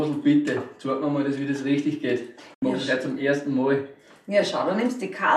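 At 2.54 s the sound fades out over about 8 ms and stays silent until 2.63 s, a hole of roughly 72 ms. This is a digital broadcast dropout: the receiver muted while corrupted or missing frames went by, consistent with about three lost frames, so that stretch of programme is gone.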